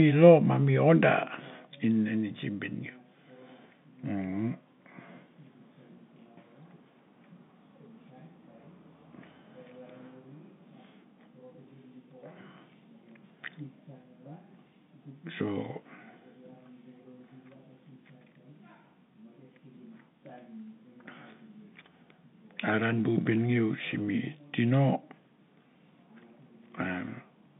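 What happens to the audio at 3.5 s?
Nothing goes wrong at 3.5 s: the speech stays intact there, carried through G.711 telephone coding with its narrow line band that stops at about 3.8 kHz.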